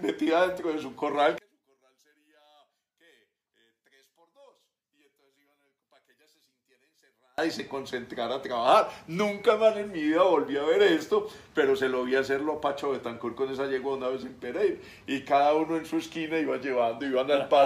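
One channel inverted, from 1.38 to 7.38 s: the sound drops by about 38 dB, leaving only a faint residue. This is likely one stereo channel with reversed polarity, so everything common to both channels cancels when they are summed to mono.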